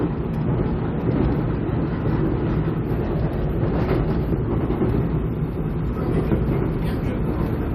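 No technical faults can be heard anywhere in this recording of sounds. Nothing in the audio points to a break in the signal chain.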